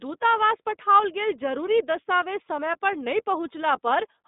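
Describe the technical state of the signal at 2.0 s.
At 2.0 s you're hearing the iLBC codec, which colours the whole clip. Each 30 ms frame is coded on its own, likely at 13.33 kbps, so the speech sounds rough and slightly synthetic, squeezed into roughly 200 Hz to 3.7 kHz with nothing above 3.8 kHz.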